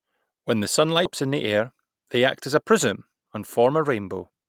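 At 1.05 s there is a skip ahead: roughly a second of speech was dropped while later audio was already queued, and playback jumps straight across with no fill, so the two sides are butted together and the missing stretch is simply gone.

Jitter buffer speed-up follows, from 1.25 to 2.19 s, ending just before "act as", and again from 2.63 to 4.45 s, right after it. An overfilled buffer trims pitch-period-sized pieces, running speech at 110% with pitch unchanged, removing about 100 ms and then 200 ms, so delivery sounds hurried.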